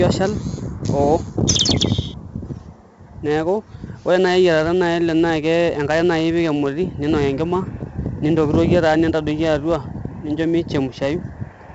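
Throughout, heavy 4-bit ADPCM compression adds gritty hiss that rises and falls with the speech, unlike steady background noise, with nothing above 7.8 kHz, fitting 64 kbps.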